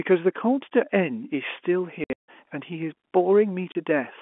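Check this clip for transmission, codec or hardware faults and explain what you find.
Two stretches of packet loss filled with silence stand out, heard through a telephone band of roughly 250 Hz to 3.4 kHz, consistent with G.711 mu-law.

Packet loss filled with silence: From 2.04 to 2.26 s, about 210 ms of sound drops out across 240 ms, the longest gap 150 ms. Another 30 ms hole hits at 3.72 s. The receiver inserted silence for missing packets, which fits 30 ms packets, so the sound cuts abruptly with hard edges.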